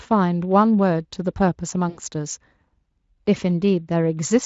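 VoIP packet loss concealed by the speech codec, 1.89 to 2.00 s: the decoder extends its last pitch and filter, so speech smears into a fading buzz or coloured noise, which fits about 80 ms of lost packets.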